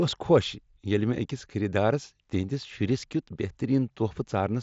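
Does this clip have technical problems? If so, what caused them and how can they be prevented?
No, the speech shows no technical faults; its top end stops near 7.7 kHz, the normal ceiling for a Bluetooth mSBC headset link, so nothing needs preventing.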